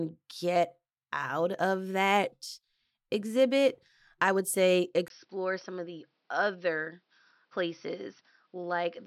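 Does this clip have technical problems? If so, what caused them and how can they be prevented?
Yes. From 5.08 s to the end at 9.06 s the speech turns duller and a few decibels quieter, with nothing above 5.9 kHz and a faint new background noise well below the signal, after a 20 ms gap at the switch. This points to an input switched to a poorer device, likely another microphone or a headset's call profile with a narrower band and its own noise. Locking the input device and disabling automatic switching prevents it.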